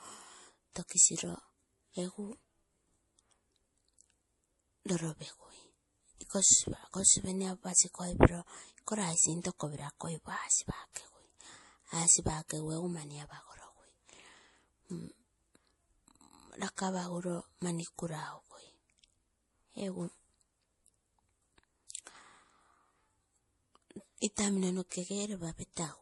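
Throughout the speech, the treble stops dead at 11.5 kHz and the sound is audibly watery, with swirling on s sounds and softened consonant attacks. This is likely MP3 compression at a starved bitrate, consistent with around 48 kbps, cutting high frequencies and switching weak detail on and off between frames.

From 10.93 to 10.96 s, a short hiss of about 35 ms leads into a sharp onset, and at 12.48 s a briefer one of about 14 ms does the same. This is pre-echo: each attack fell late in a transform block, so quantisation noise sized for the loud part spilled into the quiet moment before it.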